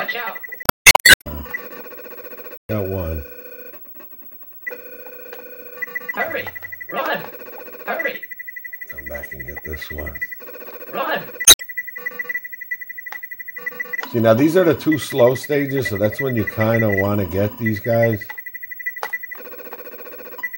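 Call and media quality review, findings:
Damaged data in a compressed stream: short chirpy, garbled blips at 0.62–0.94 s, 2.56–2.70 s and 11.44–11.62 s. Decoder is hitting corrupt frames, losing sync and hunting for the next good header. Check the transport and storage path upstream.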